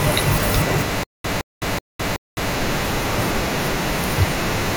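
The playback most likely stalled and kept retrying between 1.03 and 2.54 s, replaying its last buffered fragment each time before running dry. The result is stutter with silent gaps: the same 167 ms burst of speech comes back four times at a steady 376 ms pace, each repeat followed by about 209 ms of dead digital silence. The speech that should have filled this stretch never arrives.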